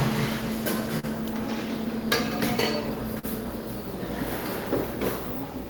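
At 0.99 to 1.06 s, there is a short concealed packet loss. About 40 ms of audio arrived too late for the decoder. The receiver covered the gap by extending the preceding sound for 35 ms, then blended back into the real signal. It comes through as a brief smear. The same fault returns at 3.19 to 3.26 s. Another 40 ms went missing, and 39 ms was filled. A short transient there can drop out.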